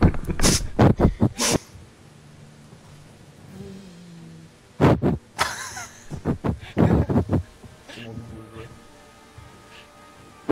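From 6.92 s to the end of the clip, a video or display buzz sits under the sound. A screen or video cable is coupling its interference into the audio path. The buzz repeats at 60 Hz, the picture's field rate, and carries a gritty hash above it. It stays well below the main sound, roughly 40 dB down, but it runs steadily once it starts and does not fade before the end.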